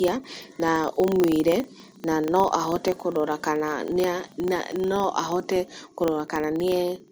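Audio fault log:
throughout generation loss: likely repeated MP3 encoding at about 64 kbit/s, roughly four passes, stacking quantisation noise, so speech sounds swirly, hollow and smeared.
throughout filter restarted on every block: the filter drops its state at each block boundary and restarts from silence, leaving a small transient that forms a 25 Hz buzz following the speech level.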